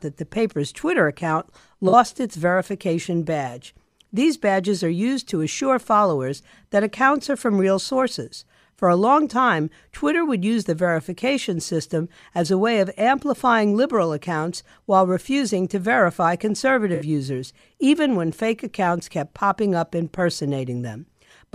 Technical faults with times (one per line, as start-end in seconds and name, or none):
1.88-1.93 AAC frame loss with concealment
16.94-17.03 AAC frame loss with concealment